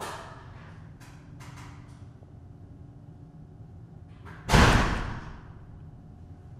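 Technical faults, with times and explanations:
2.16–2.29 s DAB burbling: weak reception lets bit errors of roughly 0.2 percent slip past error correction. Corrupted scale factors make individual sub-bands jump in level frame by frame. On a spectrogram this shows as blocky, frame-length rectangular patches flaring in narrow bands.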